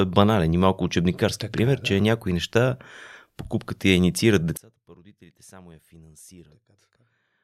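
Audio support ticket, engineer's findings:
Speech drops sharply from 4.57 s to end (7.44 s), right after "покупката я инициират". Level down about 27 dB, leaving a faint residue. Likely one channel inverted: polarity-flipped stereo leg cancelling the shared centre content on mono sum. Waveform: abrupt amplitude collapse. Spectrogram: lows and formant energy vanish, faint difference signal remains.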